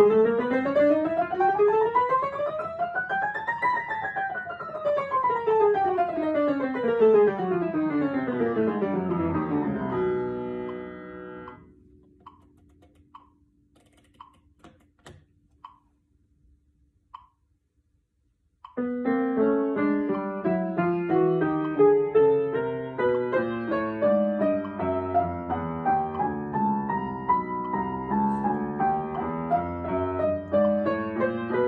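Nothing in the audio stands out as a technical fault, so there's nothing here to flag.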